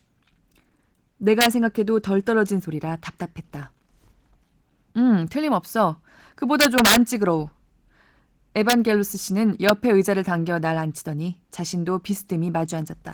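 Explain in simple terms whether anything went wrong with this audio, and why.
Two separate things went wrong with this speech recording.

The first runs through the whole clip: Opus voice compression. To save space, Opus rebuilds speech from a simplified model of the voice, with a coarser layer added for the highest sounds. Here it was squeezed hard enough that the damage is plain: the voice sounds slightly hoarse and artificial. The high frequencies are still there, so this is not a simple muffling. The roughness is in the voice itself.

The second is integer overflow, heard as sudden violent cracks at 1.41 to 1.46 seconds, 6.61 to 6.96 seconds, 8.70 to 8.73 seconds, and a single snap at 9.69 seconds. At those loud moments the numbers describing the sound grew too big for the system to hold. Instead of being capped at the maximum, they wrapped around to the opposite extreme. Ordinary clipping would sound like a flattened buzz. 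This is a harsh break, because the sound jumps from one limit to the other.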